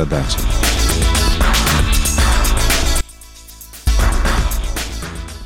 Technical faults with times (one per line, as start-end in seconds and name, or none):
3.01-3.87 one channel inverted